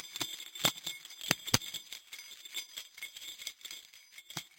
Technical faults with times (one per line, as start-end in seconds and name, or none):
0.00-4.59 imaging from sample-and-hold upsampling